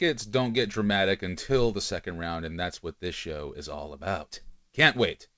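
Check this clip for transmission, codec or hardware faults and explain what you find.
There are two linked timing faults in this speech, both caused by the sender's clock running slow.

Clock drift between sender and receiver runs through the whole clip. The sender's audio clock runs about 2% slower than the receiver's, so the jitter buffer keeps draining. The receiver has to stretch what arrives, and the speech paces slightly sluggish and uneven instead of steady.

Repeated timing corrections occur from 0.04 s to 4.98 s. To cover the shortfall, the receiver repeatedly inserts short duplicated pieces, adding around 150 ms in total and slowing playback to 97% speed. Each repeat is small and irregularly spaced, heard as faint hiccups and a dragging, unsteady tempo.

The audio also passed through a G.722 call path at 64 kbps, which leaves nothing above 8 kHz.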